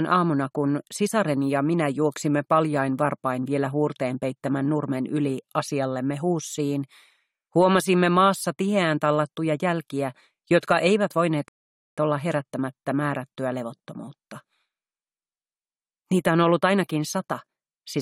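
At 11.48 s the audio drops to silence for about 0.49 s, then resumes at 11.98 s exactly where it left off. This is a rebuffering stall: playback ran out of downloaded data and waited for more, so nothing is lost but the gap adds time.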